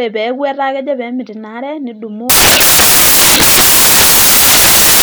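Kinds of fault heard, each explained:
Samples built from the wrong bytes: from 2.30 s to the end of the clip, the speech gives way to loud, harsh broadband noise. The bytes of each sample are being assembled incorrectly, whether shifted by one byte, reversed in order, or read at the wrong alignment, so the rapidly fluctuating low-order bits end up in the most significant position. The result is harsh noise at high level.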